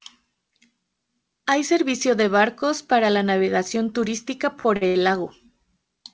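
Late packets left the jitter buffer empty three times, so the receiver stretched the last sound to cover each gap, a short stall from a late packet, at 4.60–4.66, 4.76–4.83 and 4.87–4.97 s, just after "para la navegación turística". Each holds the sound about 44, 49 and 77 ms too long, with a slight buzz or dip, before resuming with nothing lost.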